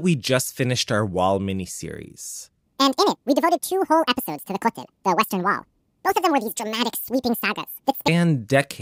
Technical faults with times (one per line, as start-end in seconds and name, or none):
2.65-8.08 section at the wrong speed